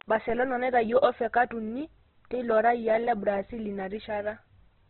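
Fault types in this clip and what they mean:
Opus compression: Throughout the speech, nothing survives above 4.2 kHz, and the heavy damage makes the sound rough, grainy and muffled rather than swirly. This is likely Opus in its CELT music mode at a very low rate, one that fits about 12 kbps. Short of bits, the encoder keeps each band's energy but fills its detail with folded or noise-like content. It also narrows the signal to narrowband.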